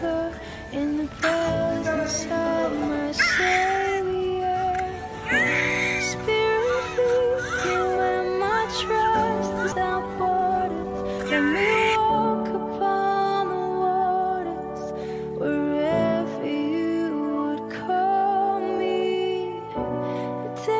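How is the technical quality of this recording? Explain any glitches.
The recording has two linked glitches in the middle. The audio came through a call codec that cuts everything above 8 kHz, which fits G.722.

At 9.72 s there is a skip ahead: about 0.7 s of audio is dropped and the two sides are joined directly. A spectrogram shows an abrupt seam with no gap.

From 9.82 to 11.26 s, a jitter buffer speed-up removes short pitch-period slices, roughly 0.3 s in total. The sound runs at 120% with unchanged pitch, and the waveform shows tiny repeated splices.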